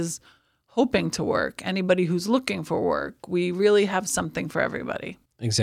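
No technical faults are audible anywhere in the speech.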